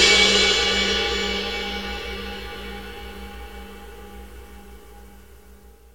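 No technical faults can be heard anywhere in the recording. There are no dropouts, glitches or other interruptions to point to at any moment.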